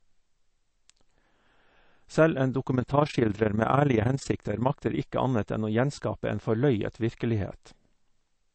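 It's a speech clip, and the whole thing has a watery, swirly texture, plainly audible codec damage that points to MP3 compression, likely at a low bitrate around 36 kbps, where the encoder drops the top end and lets weak frequency components flicker in and out. From 2.68 to 5.00 s there's also overlap-add ripple. The frames were rejoined with an overlap that doesn't sum to constant gain, so the level pumps by about 11 dB at around 30 times a second, giving a rough flutter.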